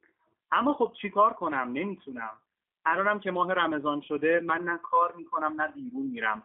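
G.729 codec damage runs through the whole speech clip: nothing above about 3.8 kHz survives, the line band sits near 200 Hz to 3.5 kHz, and a plainly audible rough, synthetic edge comes from rebuilding the voice out of a filter, pitch predictor and sparse pulses, consistent with an 8 kbit/s G.729A stream.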